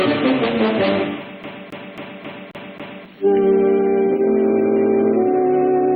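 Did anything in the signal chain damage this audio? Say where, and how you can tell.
Yes. From 1.43 to 3.05 s a CD stuck on one turn at the playback stage repeats one 0.27 s segment six times, with a short mute at each laser jump. On a spectrogram, identical blocks tile evenly, split by narrow silent gaps.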